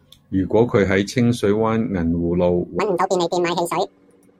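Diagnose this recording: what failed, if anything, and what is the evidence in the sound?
From 2.80 s to the end at 4.39 s, the speech suddenly runs at twice the speed and an octave (12 semitones) higher. This is audio read two samples at a time (double speed), a sample-format conversion fault. The reader treats each pair of samples as one frame, as if the stream were stereo or wider samples. That doubles the playback rate and folds high frequencies back down.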